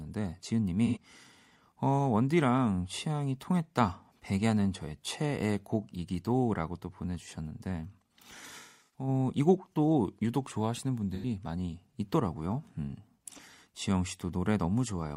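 AAC frame loss with concealment strikes three times in this speech, with the decoder patching each gap from the last good spectrum. At 0.86 s and again at 11.15 s, roughly 85 ms goes missing, which fits two lost frames, leaving a brief smeared, noisy patch. From 8.59 to 9.08 s the losses scatter, the longest run around a fifth of a second, so the sound turns phasey and thins toward silence before fading back.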